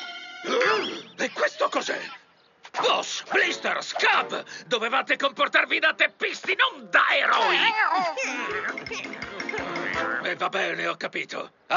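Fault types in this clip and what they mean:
No fault types turn up here, so there's nothing to list or explain for this one.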